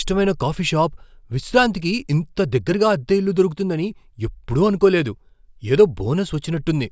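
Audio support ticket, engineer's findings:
Listened through the speech recording and nothing stood out.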